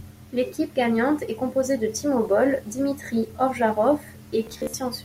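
Near the end of this speech clip, from 4.44 to 4.74 s, the sound breaks into a rapid machine-gun buzz, with a tiny fragment repeating in bursts before the speech picks up further along, as though it had kept running underneath. This is Bluetooth stutter: packets arrived late or not at all, and the receiver replayed its last buffer to fill the gaps. About 187 ms went missing across roughly 290 ms, and the longest unbroken dropout lasted 53 ms.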